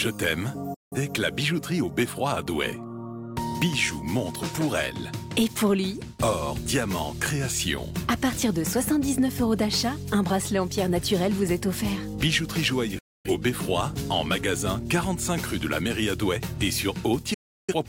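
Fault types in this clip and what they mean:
digital broadcast dropout: the receiver muted after losing good frames, so the sound fades out within 8 ms and stays silent at 0.74–0.97 s, 12.98–13.30 s and 17.34–17.74 s. Both waveform and spectrogram show flat, silent gaps with sharp edges.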